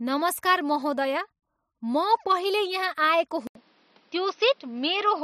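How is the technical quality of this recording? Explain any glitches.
The recording has one glitch near the end. From 3.47 s to the end, the speech turns duller and narrower. An 80 ms silence marks the switch, after which nothing is heard above 6.1 kHz and a new noise floor sits roughly 35 dB below the speech, while the level stays about the same. The likely cause is an input switched to a poorer device. The gap and the new background noise set it apart from a simple filter or codec bandwidth drop.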